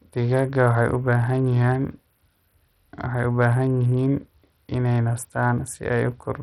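From start to end the speech carries heavy codec damage, likely from Bluetooth SBC compression at a low setting, which fits a rate near 64 kbps. With so few bits, the upper sub-bands get little or nothing while the rest are coarsely quantised, so the treble flickers in and out and a gritty grain clings to the sound. On a spectrogram the top bands look patchy and block-edged, with speckled noise and aliasing smeared through the speech harmonics.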